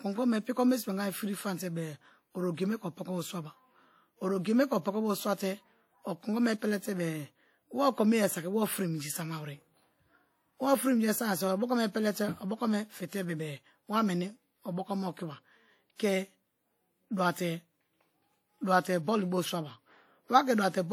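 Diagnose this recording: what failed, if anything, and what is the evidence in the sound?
The codec stage shows plainly audible damage across the whole speech clip: ringing, washy tails and a hiss that swells and fades with the signal, the likely signature of WMA compression at a rate around 48 kbps. A spectrogram would show smeared, blocky time-frequency patches and gaps where weak components drop out, with content extending to about 20.1 kHz.

Pre-echo appears from 15.96 to 15.99 s, where a short hiss runs about 37 ms ahead of an attack and softens it. The transform block spreads quantisation noise sized for the loud onset back into the quiet moment before it. The waveform would show a low noise smear before the transient, and the spectrogram a broadband haze ahead of the onset.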